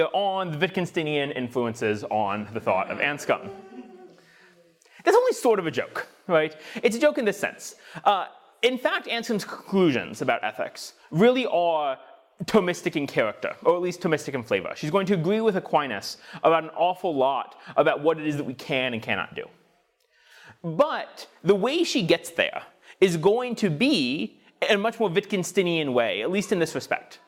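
No technical faults can be heard anywhere in this clip.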